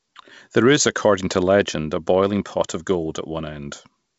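Speech over G.722 wideband coding, with nothing technically wrong.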